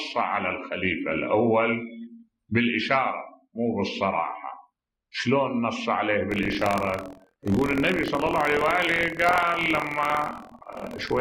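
Buffer tearing from 6.29 s to the end: writer and hardware pointers cross each period, splicing a small slice of audio from about 50 ms earlier, producing a 43.1 Hz rattle consistent with a 1024-sample buffer.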